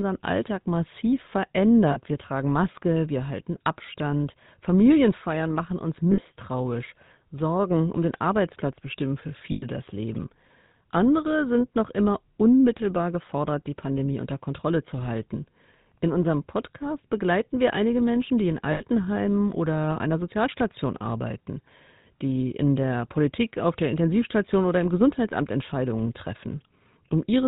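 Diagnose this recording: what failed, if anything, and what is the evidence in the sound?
The codec stage is at fault throughout. The speech carries the GSM full-rate codec's plainly audible buzzy, gravelly roughness, and nothing survives above 4 kHz. The character fits the 13 kbit/s full-rate mode. That coder models the vocal tract as a filter and excites it with regularly spaced pulses, keeping only every third excitation sample. The fine structure of the voice is lost, and the coarse pulse train is heard as grit.

Lost GSM frames occur on the transmission path at 1.92 s, at 6.12 s just after "machen uns", at 9.52 s after "bestimmen für", and at 18.72 s after "die in". The gaps last 40, 60, 100 and 80 ms, which fits runs of two to five 20 ms frames. Each gap is bridged by a rough, metallic ring. The decoder repeats the last good frame's parameters, and no gap runs long enough to fade fully to silence.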